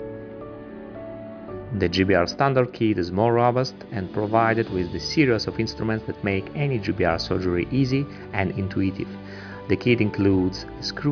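No dropouts, glitches or distortion turn up anywhere in this one, and there's nothing technically wrong to point to.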